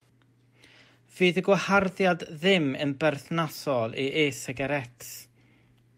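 No technical faults can be heard in this speech recording. There is nothing in it that needs a timestamp or a closer look.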